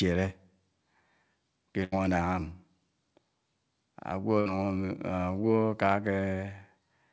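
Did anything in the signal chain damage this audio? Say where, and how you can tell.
Yes. At 1.84 to 1.94 s and again at 4.40 to 4.48 s the sound briefly freezes into a held, fading tone, then jumps ahead as though a slice was skipped. That is a burst of packet loss on the network. The receiver's concealment stretched the last decoded audio over the gap, about 80 ms the first time and about 60 ms the second, then resumed later in the stream, so that stretch of the original is missing, heard through a call codec band-limited at 8 kHz.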